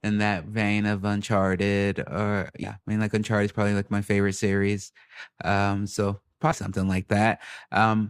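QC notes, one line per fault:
2.63–2.68 s and 6.51–6.54 s, compressed frames skipped: speech jumps ahead roughly 100 ms, then 70 ms, consistent with several 20 ms frames dropped.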